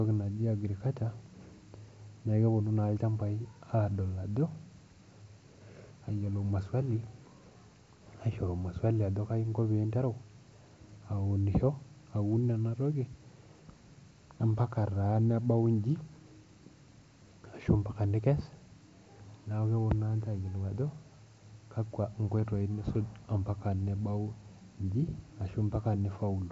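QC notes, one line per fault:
No faults are heard in this speech clip. It has passed through a WebRTC call path whose G.722 coding leaves nothing above 8 kHz, as expected for that codec.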